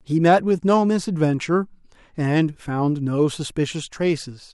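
No technical faults are audible.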